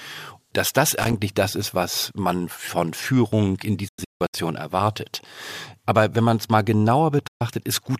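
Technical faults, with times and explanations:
0.96 to 1.13 s, loose connector crackle: between "dass das" and "das ist was man" the speech breaks into a short, irregular burst of scratching and pops. A worn or dirty contact is making and breaking as it shifts, chopping the signal on and off, and any DC on the line jumps at each break to give clicks. On a waveform the speech looks ragged and gated, with sharp spikes. A spectrogram shows thin vertical broadband streaks scattered across this 0.17 s span.
3.88 to 4.34 s and 7.27 to 7.42 s, digital broadcast dropout: the receiver stopped getting frames it could decode and muted until good ones arrived. In the first event about 320 ms of audio is lost in several holes spread over roughly 450 ms, the longest hole being 160 ms. In the second, 128 ms is lost. Each cut fades out and back in over about 8 ms, so there are no clicks at the edges. On a waveform these show as flat silent gaps with short tapered edges, and on a spectrogram as clean blank columns. 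The audio that was sent during the gaps is gone, and the speech resumes further on. The loss sizes fit dropped frames of about 32 ms each.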